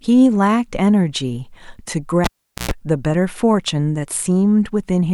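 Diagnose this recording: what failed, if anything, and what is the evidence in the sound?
A cable pulled and plugged in at the analogue wiring stage: a pop at 2.24 s, about 0.42 s of near silence, a 0.12 s burst of 60 Hz mains buzz as only the tip made contact, then a second pop at 2.71 s. That buzz and the paired pops rule out a digital dropout, which would be clean silence.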